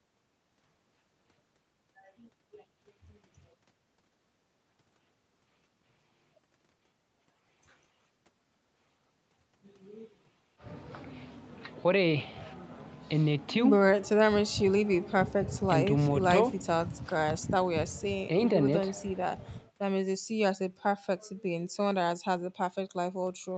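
No technical faults are present in this speech, which carries the normal character of a call path, with the band ending at about 8 kHz and the coding texture of a speech codec at a moderate rate.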